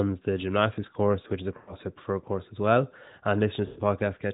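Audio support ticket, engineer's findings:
Speech smears and fades out twice, at 1.58–1.75 s and 3.66–3.81 s, then returns thin and rough. Lost AMR speech frames: decoder concealment repeats the last good pitch and vocal tract settings with falling gain, fitting roughly 100 ms and 120 ms gaps. Narrowband AMR path audible, light damage, consistent with 12.2 kbps.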